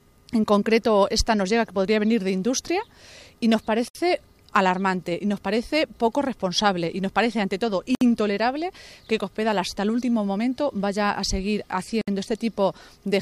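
Three short dropouts break otherwise continuous sound, at 3.88 to 3.95 s, 7.95 to 8.01 s and 12.01 to 12.08 s, each lasting about 64 to 66 ms, with softened edges before the audio resumes exactly where it left off. The regular 4-second spacing identifies a gap at a join of encoded pieces: separately encoded segments were concatenated with each run's leading encoder delay and final-frame padding left untrimmed.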